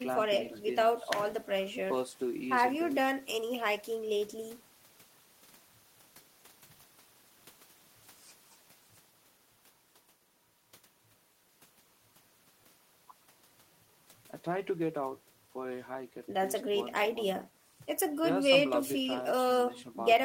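Nothing in this speech recording stood out as a technical fault on listening.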